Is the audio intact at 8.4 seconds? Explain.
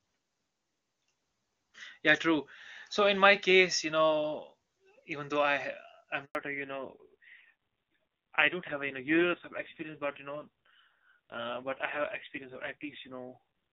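No. From 6.35 s to the end, the call is in a fallback to narrowband, switching from AMR-WB at 23.85 kbit/s to AMR-NB at 5.9 kbit/s. Nothing above 4 kHz survives, so the speech turns dull and rough, and a spectrogram shows a hard, flat ceiling at 4 kHz from 6.35 s onward.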